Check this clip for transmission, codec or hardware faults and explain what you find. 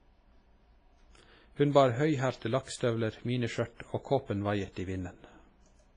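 One codec fault runs through the whole speech clip. It sounds heavily damaged, with ringing, washy smearing and a hiss that swells and fades with the signal. Nothing comes through above 10.5 kHz. This is likely WMA compression at a low bitrate, around 24 kbps. Long transform blocks spread quantisation noise over tens of milliseconds, and weak components are zeroed. The smearing also blurs onsets.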